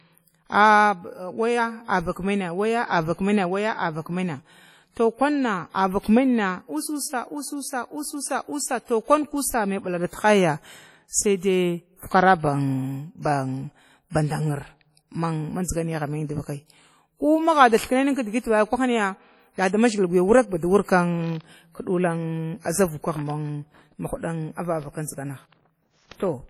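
Heavy WMA compression runs through the whole speech clip, likely from a low-bitrate transform encoder, roughly 32 kbps. Long blocks smear quantisation noise into a ringing, washy haze and a hiss that breathes with the voice, weak detail drops out, and nothing remains above 17.6 kHz.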